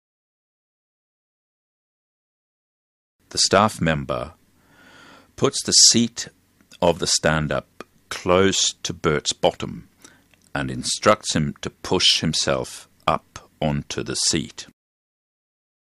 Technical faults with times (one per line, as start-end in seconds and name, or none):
0.16-15.62 clock drift buffer slips